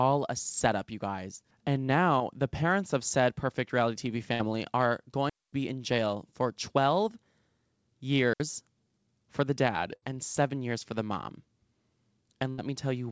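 A speech recording carried over a call link, with the band ending at 8 kHz as expected of a 64 kbps G.722 path, it shows three kinds of fault. A short concealed packet loss at 2.18 to 2.22 s, just before "the parents of said", replaces about 20 ms with a continuation of the preceding sound. It is heard as a brief smear. On a spectrogram the preceding sound runs on unnaturally smooth for that sliver. Bursts of packet loss occur at 4.34 to 4.42 s, 9.96 to 10.04 s (between "for the dad" and "and seven years for") and 12.50 to 12.60 s. The concealment holds the last sound for about 58, 62 and 81 ms as a fading buzz or hiss, then skips ahead. A spectrogram shows frozen, decaying bands, and the waveform shows a tapering envelope before a jump. Digital wireless dropouts at 5.29 to 5.53 s (about 234 ms, ending just before "be in jail for") and 8.33 to 8.40 s (about 68 ms) are clean mutes with very short fades and no noise burst. 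Both the waveform and the spectrogram show a flat, empty gap.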